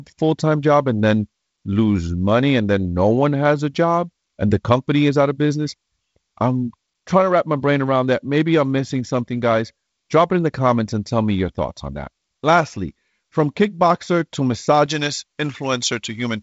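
From 14.86 s to the end, pre-emphasis was left on, its treble boost never undone. The highs sit about 11 dB too strong, so the speech turns thin, bright and sibilant.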